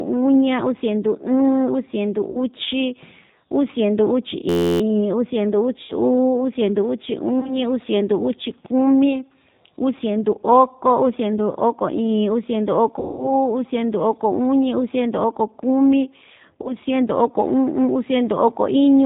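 A speech recording carries plainly audible G.729 codec damage throughout. The sound is coded at 8 kbit/s from a vocal tract filter and pitch predictor. Nothing above 4 kHz survives. The result is a narrow, rough and slightly synthetic tone. VoIP packet loss concealed by the speech codec occurs at 2.31 s and 5.83 s, both right after "uu siendu", and again at 7.40, 12.99 and 16.62 s. The gaps run from 20 ms to 200 ms, the longest at 12.99 s. The decoder fills them by stretching the last sound into a fading buzz. A system hang loop runs from 4.49 to 4.81 s, ending just before "uu siendu". An 11.61 ms piece repeats 27 times, giving a steady buzz at 86.1 Hz. That fits a 512-sample buffer, and little or no audio is lost.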